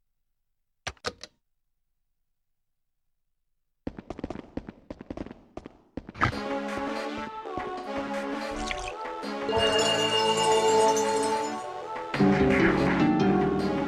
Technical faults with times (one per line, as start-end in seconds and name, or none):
7.77-7.89 AAC frame loss with concealment